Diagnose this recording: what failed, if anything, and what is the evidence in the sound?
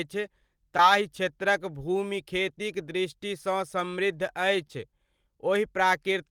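Short concealed packet loss at the network stage, heard twice in this speech: a brief smear at 0.77–0.79 s and a longer wobble at 4.67–4.80 s. About 10 ms of audio failed to arrive each time, and the decoder bridged it by extending the preceding sound. At the second event it filled about 17 ms and then dropped about 9 ms to get back in step. On a spectrogram the bridged stretch shows repeated, smoothed harmonics or flat noise with a soft seam.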